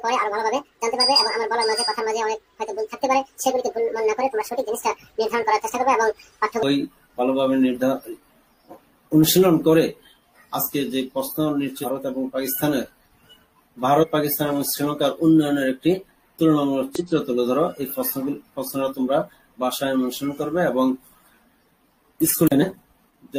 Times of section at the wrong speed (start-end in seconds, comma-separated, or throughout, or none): 0.00-6.63